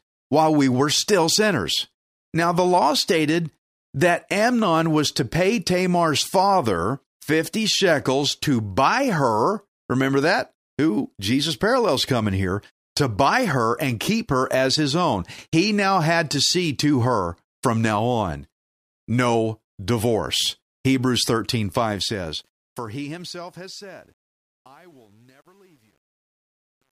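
Truncation distortion on a fade runs from 21.74 s to the end at 26.93 s, during the speech's fade-out, which starts at roughly 21.7 s. The gain stage drops low-order bits without dither, and the grain fits a word length of about 10 bits. As the level sinks, the waveform collapses into coarse square steps. From 23.56 s onward the tail turns gritty.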